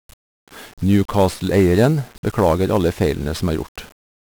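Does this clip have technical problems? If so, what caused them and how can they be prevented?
Yes. Throughout the speech, 1-bit DFPWM compression coats everything in fuzzy crackle and broadband hiss that buries the treble, which fits a 48 kbps stream. Each sample's single bit only nudges an adaptive level up or down, so coarse quantisation noise dominates. To prevent it, store or transmit the audio with a higher-resolution codec or PCM instead of DFPWM.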